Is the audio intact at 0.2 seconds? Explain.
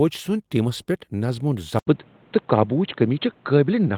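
Yes, at 0.2 seconds the speech is intact, with no fault to be heard at that moment.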